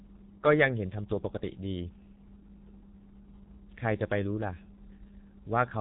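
The speech was squeezed through a G.723.1 codec for the whole clip, heavily damaged, at a rate that points to roughly 6 kbit/s, with 30 ms frames. Everything above 4 kHz is gone, and the slow model updates leave the voice muffled and hoarse, consonants smeared together.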